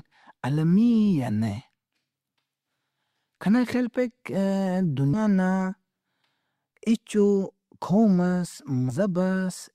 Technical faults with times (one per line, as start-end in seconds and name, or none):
5.13-5.18 compressed frames skipped
8.89-8.92 compressed frames skipped